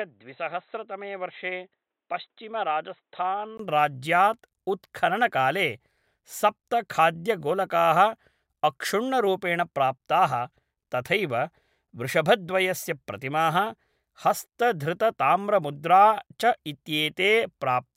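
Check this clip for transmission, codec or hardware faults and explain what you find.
One fault, an input switched to a poorer device, from 0.0 to 3.59 s. The opening speech sounds dull and boxy, about 5 dB quieter, over faint new background noise, likely from a lesser microphone or call-profile input. A 20 ms silence marks the switch back. On a spectrogram, nothing appears above 4 kHz until that gap, then the upper band fills. The waveform shows a step up in amplitude there.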